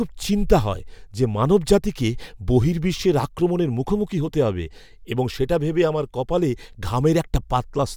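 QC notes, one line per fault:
Nothing stood out on listening to this speech clip.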